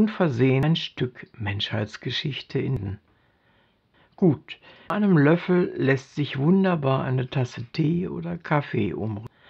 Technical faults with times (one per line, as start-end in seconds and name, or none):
0.63 damaged data in a compressed stream
2.77 damaged data in a compressed stream
4.90 damaged data in a compressed stream
9.27 damaged data in a compressed stream